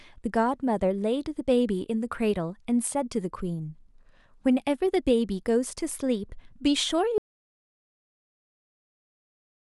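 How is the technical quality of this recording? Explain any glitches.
The recording has one clear glitch: an audio dropout to silence. At 7.18 s the speech cuts off mid-flow, and from there to the end of the clip, about 2.4 s later, there is silence with not even room tone left. Whatever was said in that stretch is gone. The likely cause is that the input was lost, through a disconnected device, a failed link or an accidental mute, while the recorder kept writing silence.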